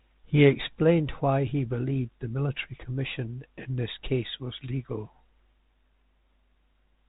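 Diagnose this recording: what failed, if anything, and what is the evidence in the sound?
Nothing here has failed: the speech comes through the telephone-band G.726 path at 32 kbit/s just as that path is meant to, and there's no dropout, click or other fault to point to anywhere in the recording.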